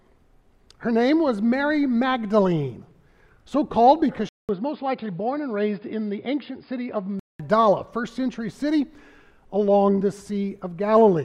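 The input likely switched to a poorer device at 4.29–7.39 s: after a 200 ms gap, sound dulls with nothing above 5 kHz, drops slightly, and gains faint background noise.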